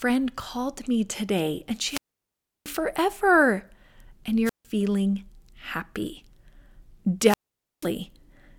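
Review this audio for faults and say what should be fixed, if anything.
Wireless microphone squelch dropout occurs three times in this speech: at 1.81–2.79 s, just after "called me today and", with a 0.68 s mute; at 4.45–4.65 s, muting 0.16 s; and at 7.22–7.90 s, muting 0.49 s. Each time the FM radio link fades, hiss swells, and the receiver's squelch closes. That hiss before the silent hole sets it apart from a digital dropout, which cuts cleanly. Better antenna placement, clear line of sight, or diversity receivers prevent it.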